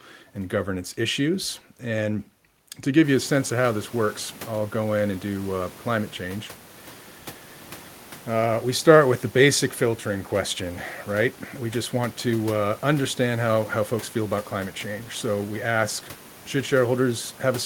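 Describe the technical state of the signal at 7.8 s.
At 7.8 s the signal is intact, with only the room's own background noise audible, sitting about 23 dB below the speech.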